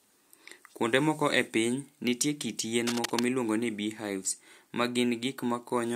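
From 2.87 to 3.24 s, a burst of cable scratch noise sits over the speech: a dense, irregular crackle and rustle lasting a little over a third of a second, only slightly quieter than the speech itself. The likely cause is a worn cable, connector or control being moved, so that its contact resistance fluctuated rapidly and modulated the signal path. The scratching stops at 3.24 s.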